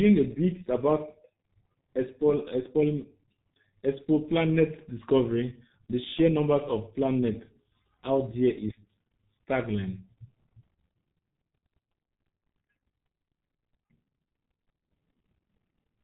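Across the whole clip the speech carries heavy G.723.1 codec damage, which fits a bitrate near 6.3 kbit/s. The coarse 30 ms frame model leaves speech muffled and hoarse with smeared consonants; a spectrogram shows an empty band above 4 kHz and blurred, blocky formants.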